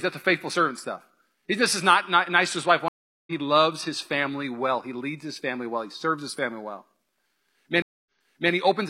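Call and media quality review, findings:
Stream reconnect, 2.88–3.32 s: audio drops out for 0.39 s, then picks up roughly 0.4 s further along, so a chunk is skipped. Connection loss. Player reconnects to a live feed and spins up a fresh decoder, with a soft muted start.

Stream reconnect again, 7.82–8.52 s: 0.24 s gap, then playback resumes 0.46 s earlier and repeats a bit. Same reconnect path, but here the server resent a burst on rejoin.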